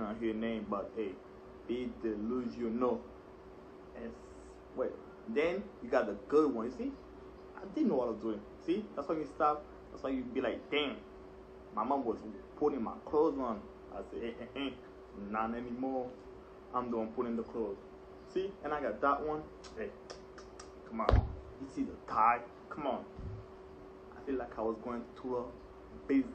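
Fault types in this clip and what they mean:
compressed frames skipped: A few whole compressed frames never reached playback, either missing from the file or rejected by the decoder as damaged. The audio jumps ahead by roughly 150 ms, about three frames of around 46 ms, four times.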